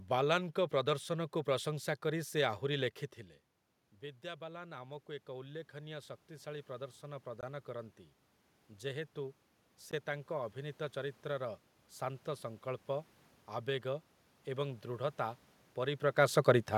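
Shortly after 3 s the talker moves, and the speech level at the microphone falls by about 14 dB. From 4.21 s to 8.03 s the automatic gain rising fault follows. The gain control hears a weaker input and raises its gain by about 8 dB. It climbs slowly over nearly four seconds. The voice and the room noise swell up together. The loss is only partly made up.

At 7.41 s the audio drops to silence for 19 ms. It then resumes. At 9.91 s a second gap of 16 ms cuts in, just before "ତାଙ୍କ ଅଭିନୀତ". Each is a brief, hard dropout, not a fade. The likely cause is a Bluetooth stall. Interference delayed packets, the headphone buffer emptied, and playback paused until the data arrived.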